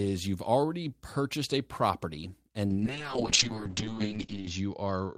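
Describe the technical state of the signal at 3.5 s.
At 3.5 s the signal is inside a call bitrate drop that begins at 2.67 s and runs to the end of the clip. The bandwidth estimate fell, so the encoder had far fewer bits to spend. The sound fits a fall from 32 kbps to roughly 7 kbps, which stays at its lowest for about 1.8 s. Speech turns coarse and watery, and the audio band narrows from 20 kHz to 8 kHz, leaving it muffled.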